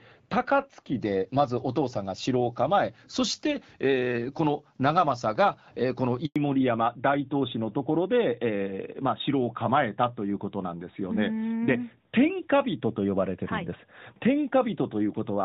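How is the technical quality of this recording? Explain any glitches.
The recording has three distinct glitches: a brief phasey opening, a short dropout, and a lasting loss of bandwidth for the remainder of the speech.

Channel delay (comb filtering), 0.0 to 1.0 s: one channel lags the other by a tiny amount, roughly a tenth of a millisecond, and the two are summed. Cancellation at the first notch, around 5 kHz, makes the voice hollow and slightly dull. A spectrogram shows a fixed dark horizontal band there.

Handover gap, 6.26 to 6.36 s: the call was switched between networks and no speech frames arrived for 100 ms. The voice fades out within a few tens of milliseconds and leaves silence. On the waveform this is a flat stretch, and on a spectrogram it is a blank vertical strip.

Fallback to narrowband, 6.36 s to the end: the call stepped down from HD Voice, the light wideband coding heard earlier, to a narrowband codec. 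Nothing above 4 kHz remains, so the voice turns duller and rougher. A spectrogram shows energy abruptly capped at 4 kHz.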